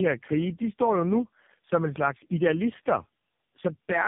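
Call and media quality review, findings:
Tandem speech coding, entire clip: rough, muffled, warbly speech with a hard ceiling at 3.6 kHz. The sound fits three speech codecs in a row, likely AMR-NB, GSM full rate, then AMR-NB again, with each border decoding and re-encoding the previous coder's output so the errors compound. On a spectrogram, energy stops flat at 3.6 kHz and the harmonics look smeared and patchy. The waveform shows a blurred, noisy fine structure.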